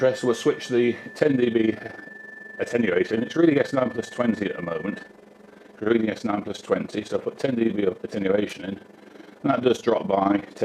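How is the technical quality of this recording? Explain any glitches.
Technical quality is poor from 1.2 s onward: an overlap-add ripple runs through to the end. The audio was split into windowed frames and rejoined with an overlap whose gains don't sum evenly, so the level dips and swells by about 11 dB around 20 times a second, giving a rough, fast flutter.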